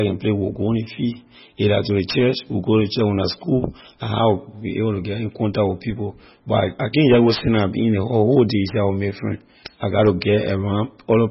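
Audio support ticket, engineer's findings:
Likely cause: MP3 compression at a starved bitrate, consistent with roughly 16 kbps. Encoder drops all content above 5.5 kHz and zeroes weak frequency lines frame to frame. Symptom throughout speech: dull, band-limited top end, heavy watery swirl, metallic chirps on s sounds, consonant attacks smeared.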